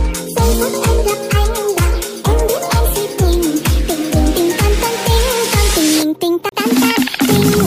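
A CD skip occurs at 6.49 to 6.52 s. A knock or a surface flaw threw the player's laser off its track and onto another turn of the disc's spiral. The player mutes briefly, for roughly 30 ms, while it relocks, then resumes from a different point on the disc. The result is a short tick followed by an abrupt discontinuity, as the sound jumps instead of flowing on from where it stopped.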